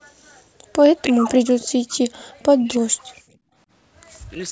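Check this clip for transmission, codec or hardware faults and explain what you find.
The clip has echo-canceller faults: background gating, two stretches of speech suppressed in double talk, and a brief echo leak.

From 0.00 to 0.73 s the background is gated by the echo canceller. The room sound is pulled down by about 36 dB while far-end audio plays.

From 1.07 to 2.10 s and again from 2.45 to 3.29 s the speech dips deeply. This is likely speech suppressed in double talk, where the canceller attenuates the local talker during simultaneous far-end activity.

At 2.18 to 2.24 s an echo leak appears as a very faint delayed copy arriving 316 ms late. Residual loudspeaker pickup likely passes the canceller and returns.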